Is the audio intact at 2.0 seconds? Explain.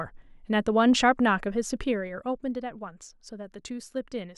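No. From 1.54 to 2.51 s the gain is being pulled down in coarse 2 dB jumps, about seven a second, with no smoothing between them, a case of zipper noise. The level falls roughly 10 dB over that span, and every jump puts a small discontinuity into the waveform. At 2.0 s you hear this as a ticking, zipper-like rasp riding on the speech while the level drops.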